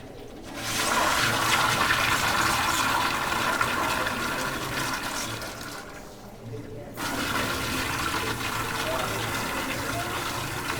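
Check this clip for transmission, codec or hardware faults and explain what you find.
One fault stands out: a stream segment skipped, heard from 6.97 to 7.02 s. The sound jumps abruptly forward, with a brief blip lasting about 50 ms at the join, so the material on either side no longer follows on continuously. The likely cause is a segmented stream in which one chunk failed to arrive or load, and the player moved straight on to the next one, leaving a gap in the programme.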